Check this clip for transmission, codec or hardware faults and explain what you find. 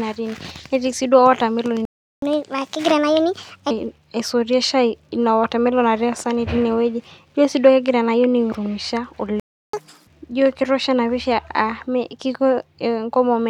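Two playback stalls are audible, each followed by a stretch of catch-up at higher speed, so the speech breaks twice and then rushes to regain time.

Playback stall, 1.85 to 2.22 s and 9.40 to 9.73 s. The speech cuts to silence mid-flow for about 371 ms, then about 337 ms. The likely cause is the player's buffer running dry or its output thread being blocked, leaving nothing to send to the output until it recovered.

Catch-up at higher speed, 2.22 to 3.71 s and 9.73 to 10.07 s. After each gap the player resamples its backlog to play it faster and win back the lost time. The first stretch runs at 1.25 times normal speed, with pitch raised about four semitones, for roughly a second and a half. The second runs at 2 times speed, pitch up about ten semitones, giving a brief chipmunk-like burst.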